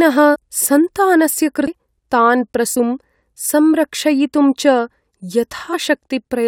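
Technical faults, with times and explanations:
0.34 to 0.36 s, 2.75 s and 5.72 to 5.74 s, damaged data in the compressed stream: each is a short chirp, squawk, click or hole cutting into the speech, lasting from about 12 ms to about 24 ms. Corrupted bytes in the coded stream left those frames unreadable, so the decoder produced garbage for an instant, lost its frame sync, and had to hunt for the next valid header before normal playback resumed.
1.67 s, CD skip: a brief tick and a very short mute of around ten milliseconds, after which the speech carries on from a different point. A knock or a surface flaw threw the laser onto another turn of the disc's spiral. The player silenced its output while it relocked and then continued reading from wherever the laser had landed, which breaks the continuity of the speech.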